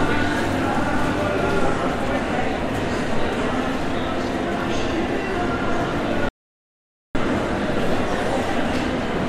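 At 6.29 s the input feeding the recorder was likely cut off, through a disconnected device, a failed link or an unintended mute, while writing carried on with silence. The result is an audio dropout to silence: the sound stops abruptly and is replaced by dead silence, with no room tone or noise floor underneath, for 0.86 s. It resumes mid-flow at 7.15 s, and whatever occurred in that gap is missing.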